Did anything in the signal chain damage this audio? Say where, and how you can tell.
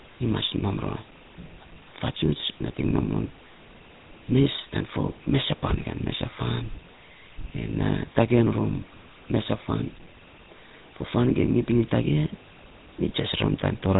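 Yes. The speech has a buzzy, gravelly roughness from start to finish, and nothing comes through above 4 kHz. That points to the codec stage, specifically the GSM full-rate codec at 13 kbps. It rebuilds the voice from a vocal-tract filter driven by a sparse, regularly spaced pulse train, keeping only a third of the excitation samples. The coarse pulse excitation causes the rasp, and the codec's narrow band causes the dull top end.

At 5.76 to 5.84 s, just before "kan mesa", the sound breaks into a short squawk and gargle. These are GSM bit errors, a network-stage fault in which corrupted bits on a weak radio link reached the decoder. Damaged filter, pitch or gain values briefly warped the spectrum and the level. The 80 ms burst fits about four 20 ms frames, and the amount of damage suggests a bit error rate around 2%.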